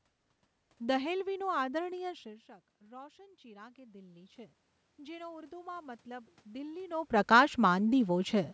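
After "દહેલવીનું આદરણીય શીર્ષક", from 2.87 to 4.43 s, the automatic gain rising fault appears. The input has dropped by about 19 dB, as the talker moves away around 2 s. The gain control hears this quiet level and lifts its gain by about 6 dB. The speech and room noise swell together. From 4.97 to 7.19 s, it happens again. The gain climbs by about 5 dB more, and the background rises with the speech.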